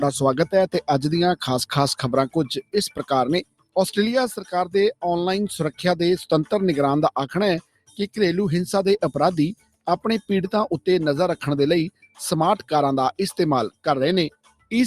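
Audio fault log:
Throughout: noise suppressor applied to music or sounds. A speech-tuned suppressor was left running, so it keeps mistaking sustained parts and ambience for noise. Level swings by around 10 dB as it clamps down and lets go, giving a pumping, thinned-out feel while attacks still punch through.
2.62–3.03 s, 3.44–3.76 s, 7.61–8.17 s, 9.55–9.87 s, 11.91–12.19 s, 14.3–14.71 s: sound cut by the noise suppressor. Each time, held or decaying sound gets judged as noise and ducked hard, by about 17 to 22 dB, so tails vanish early and the sound briefly hollows out.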